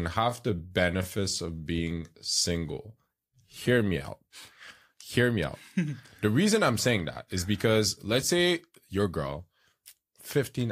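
From 0.0 to 4.04 s the speech drags at unchanged pitch: a time-stretched section, likely slowed to 0.74 times speed by repeating short pieces.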